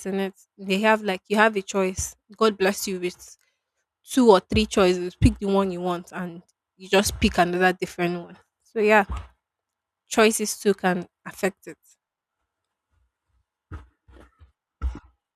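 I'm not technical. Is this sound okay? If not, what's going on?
Yes, this sound is okay, and nothing is going on with it that needs fixing.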